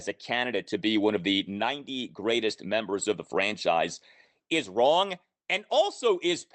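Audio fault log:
No faults heard.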